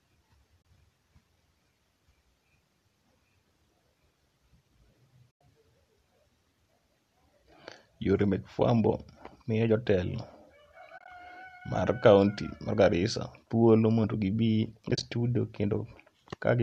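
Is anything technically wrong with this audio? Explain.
Yes. AAC frame loss with muting occurs at 0.62 s, 5.32 to 5.41 s, 10.98 to 11.08 s and 14.89 to 15.03 s. Lost frames were decoded as silence, and the overlapping windows fade the sound out and back in, leaving soft-edged holes. The holes are about 30 ms and 100 ms long, which fits roughly 10 ms frames. The last two are 70 ms of gaps scattered across 100 ms and 140 ms, giving a broken, stuttering dropout.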